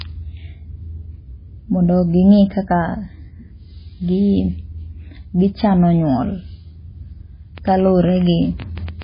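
MP3 compression runs throughout this speech clip: nothing above 5 kHz survives, and the watery, swirling texture points to heavy encoding, likely at a bitrate as low as 16 kbps. A train of clicks from 7.58 to 9.03 s brings around fifteen irregular pops, about 9 per second and roughly 5 dB above the speech, likely interference or a faulty connection.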